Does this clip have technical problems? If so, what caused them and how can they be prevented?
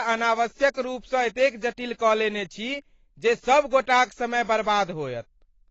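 Yes. The speech carries AAC compression damage from start to finish, and it is plainly audible. Nothing reaches above 8 kHz, so the top octave of sibilance and breath is gone and the sound is dull, while consonants smear and sustained vowels take on a warbling, fizzy texture. This points to AAC-LC at around 24 kbps, which is likely the cause: too few bits to code the spectrum, so the encoder drops the highs and quantises coarsely. Prevention: encode at a higher bitrate, around 96 kbps or more, or keep a lossless copy.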